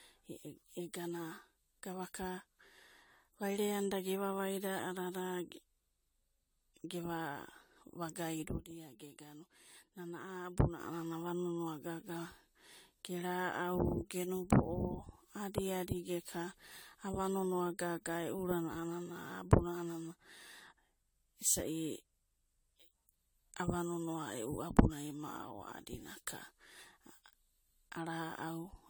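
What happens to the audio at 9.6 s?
At 9.6 s you're inside a sudden gain jump: at 8.48 s the level drops abruptly by about 7 dB and stays down until 10.8 s. The speech and the background noise fall together, which likely means a gain change was applied in a single step with no ramp.

There's also generation loss running through this stretch. The sound is swirly, smeared and hollow, with soft, blurred attacks. That's likely from AAC-LC at 96 kbit/s being decoded and re-encoded around ten times, with each pass adding fresh quantisation noise and spectral holes.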